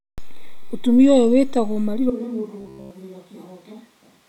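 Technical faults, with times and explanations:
2.1 s to end: switch to a distant microphone. From 2.1 s the sound turns roomy and hollow, loses bass, drops about 10 dB in level, and carries room noise only about 30 dB below the speech. The likely cause is that the close microphone's feed was lost and a farther pickup took over. The waveform shows a sudden step down in amplitude with a higher noise floor between phrases. On the spectrogram, low-frequency energy thins and reverberant tails smear each syllable.
2.61 to 2.91 s: robotic sound from repeated short buffers. Throughout this 0.3 s stretch the sound becomes a rigid metallic buzz at 66.8 Hz that only loosely tracks the speech. The likely cause is fresh audio arriving too late, so the last chunk of about 15 ms is repeated in place of the missing material, which fits a 15 ms buffer. The waveform shows one identical cycle repeating every 15 ms. 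The spectrogram shows flat, evenly spaced harmonic lines at multiples of 66.8 Hz.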